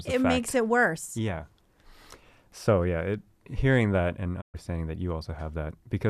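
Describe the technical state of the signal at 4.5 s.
At 4.5 s the speech is inside a digital broadcast dropout running from 4.40 to 4.56 s, just after "it hearing that and". The receiver stopped getting valid frames and muted, fading out over 20 ms into a 120 ms silence; that audio is lost.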